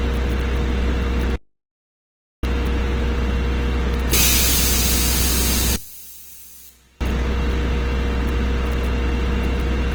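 Across the whole clip the everyday sounds come through grainy and rough, with tonal parts turning noisy. That points to Opus compression in its music mode, likely at a low rate around 16 kbps. Bands stay filled but are smeared with noise, and the bandwidth still reaches about 20.1 kHz.

At 1.36 s the audio drops out to complete silence with no room tone, and it returns at 2.43 s. Roughly a second of material is simply gone, most likely because the input was lost while the recorder kept writing silence.

From 5.76 to 7.01 s the sound suddenly falls by about 21 dB. This is the one-channel-inverted effect heard in mono. One channel has likely flipped polarity, so everything common to both channels cancels and only a faint difference signal remains.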